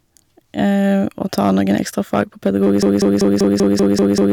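Hard clipping runs throughout: speech peaks overdriven by about 6 dB are sliced flat, so only the loudest moments crackle, rather than a constant fuzz. From 2.83 s to the end, a broken-record loop repeats one 0.19 s fragment eight times back to back, identical copies rather than a decaying echo, likely a stalled stream resending its last buffer.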